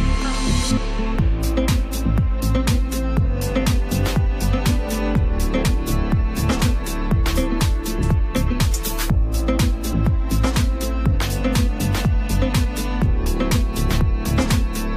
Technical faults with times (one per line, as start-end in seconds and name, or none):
1.14 damaged data in a compressed stream
5.67 damaged data in a compressed stream
9.92 damaged data in a compressed stream
12.63 damaged data in a compressed stream